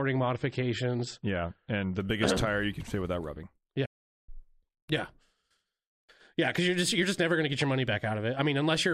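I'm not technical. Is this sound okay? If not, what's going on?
No, there are two problems.

For the first two seconds the speech sounds dull and muffled, with the crisp top end missing (nothing above about 8.4 kHz) and a processed, watery texture. At 2.0 s it suddenly becomes clearer, with no break in the sound. This is an adaptive stream starting at a low bitrate: the player began with a lower-quality version so it could start quickly, then switched to a better one once it knew the connection could handle it.

Right after "can fit without rubbing", at 3.85 s, the sound cuts out mid-flow and stays silent for about 0.42 seconds before carrying on at 4.29 s. This is a playback stall. The player likely ran out of incoming data, or was briefly held up by something else on the device, so it had nothing to play until it caught up again.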